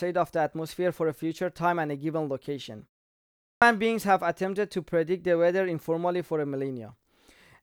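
Clipped start after a pause, at 3.41 to 3.62 s: after roughly 0.6 s of silence, the output path had gone idle and needed time to wake before passing sound again, so about 0.21 s at the onset of the next phrase never reached the listener. The speech bursts in abruptly, already underway, its opening sounds missing.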